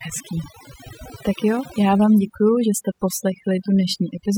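Across the whole speech clip, overdone noise removal has been applied: bands near the estimated noise floor are gated off, so the background collapses to near silence dotted with twinkling specks. A spectrogram shows isolated flickering blobs and ragged holes between harmonics.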